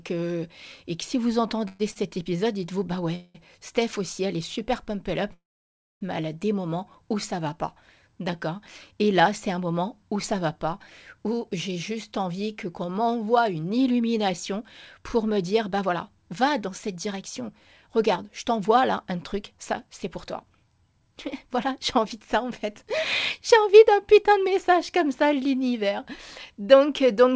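Right after "et si vous", at 1.68 to 1.81 s, there's a call audio freeze. The likely cause is packets held up in transit, so the jitter buffer ran dry and the receiver padded about 115 ms by carrying the last sound on as a fading buzz or hiss. Nothing gets lost, but a hole is pushed into the speech. The same thing happens at 3.15 to 3.37 s, padding roughly 190 ms. The big one comes after "pump up", from 5.34 to 6.03 s. There, 673 ms is filled and the last 610 ms of it is pure silence before "mais elle a des" picks up exactly where it left off.

Squeezed in at 1.91 to 1.98 s is a short stall from a late packet. One packet missed its slot and the receiver stretched the current sound for about 41 ms until it showed up. You hear a syllable held a touch too long with a slight buzzy dip, and nothing is skipped.

Then the buffer pays back all that built-up delay with a jitter buffer speed-up. From "où ça va pas" at 11.18 s through to "message comme ça" at 24.46 s, the receiver keeps cutting out pitch-period-sized slivers. 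The speech runs at about 106% with the pitch unchanged and comes across as slightly rushed, with something like a second trimmed in total. A shorter burst follows at 25.66 to 26.81 s, at around 107%, trimming about a tenth of a second. All of it rides on the G.722 call path, which leaves nothing above 8 kHz.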